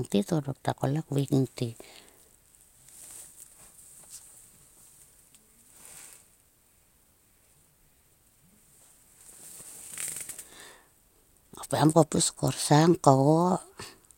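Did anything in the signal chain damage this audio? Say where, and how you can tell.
No, nothing in the chain from capture to playback has left an audible mark on this speech.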